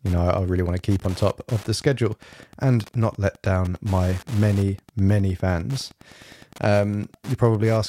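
A speech recording with Wi-Fi interference running the whole way through. A steady tick sits under the voice, repeating every 102.4 ms, about ten times a second. It is roughly 25 dB below the speech. A nearby Wi-Fi radio's beacon is being rectified by the audio circuit.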